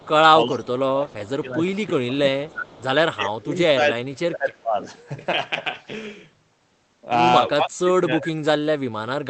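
From 0.00 to 0.08 s, and again at 1.11–1.29, 2.48–2.52 and 2.68–2.83 s, faint delayed copies of the speech trail it by 330 ms, about 25 to 30 dB down. This is an echo leak, likely from a far-end loudspeaker whose canceller let residue through. On a spectrogram it shows as weak, smeared harmonic ghosts offset from the main traces.

From 0.46 to 2.68 s, 3.16 to 4.90 s and 7.49 s to the end, the speech is suppressed in double talk, likely because the canceller ducked everything while both sides spoke. The level dips by up to about 15, 25 and 35 dB. The waveform envelope collapses in patches, and the spectrogram thins to gaps.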